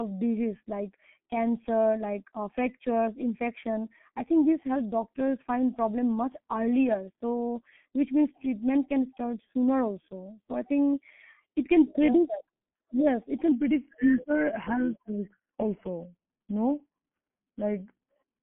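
G.723.1 codec damage runs through this whole speech clip: nothing above 4 kHz survives, and the heavy, slowly updated low-rate coding, consistent with about 6.3 kbit/s, leaves voices muffled, hoarse and smeared at the consonants. A section at the wrong speed runs from 13.52 s to the end at 18.43 s, playing at 0.893 times normal, so pitch falls roughly two semitones and delivery drags, likely from being clocked at the wrong rate.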